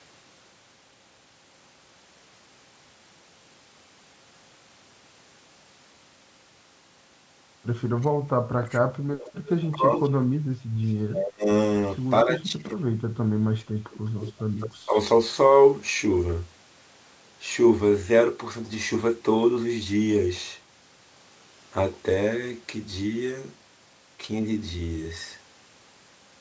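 From 8.01 to 9.94 s the speech is suppressed in double talk, dipping by about 30 dB. It is likely the echo canceller turning down its own talker along with the loudspeaker echo while they overlap, which shows as gouged gaps in the waveform envelope. From 9.18 to 10.1 s an echo leak appears: a copy of the speech delayed 265 ms, about 10 dB down, visible as smeared, repeated harmonic traces. A tiny leak follows at 10.88 to 10.92 s, about 40 dB down. Double-talk suppression returns at 11.1 to 11.49 s (about 35 dB) and 12.24 to 12.83 s (about 25 dB). Another echo leak runs from 13.91 to 14.99 s with a 205 ms delay, about 15 dB down, overlapped by a suppression dip of about 20 dB at 14.71 to 14.97 s. Throughout, the spectrogram shows the call microphone processing's normal ceiling, with nothing above 8 kHz.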